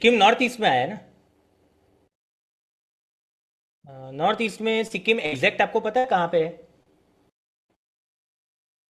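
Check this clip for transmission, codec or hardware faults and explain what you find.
Two kinds of network fault occur, both caused by packets failing to arrive on time.

A short stall from a late packet occurs at 4.87 to 4.93 s and at 6.83 to 6.99 s. The jitter buffer ran dry, and the receiver stretched the last sound for about 27 ms, then 32 ms. Nothing is lost, but the speech hangs briefly and the delay grows.

A burst of packet loss occurs at 5.26 to 5.37 s and at 5.99 to 6.10 s. Consecutive packets never arrived in time, so about 60 ms of speech is gone each time. The receiver extended and faded the last sound before the speech jumps ahead.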